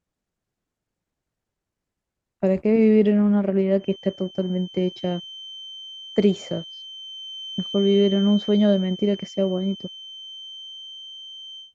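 From 3.75 s to the end of the speech, a feedback whistle sits under the sound: a thin, steady tone at 3.1 kHz, around 20 dB below the voice level, swelling and fading slowly in level. The likely cause is a loudspeaker-to-microphone loop held just at the edge of feedback.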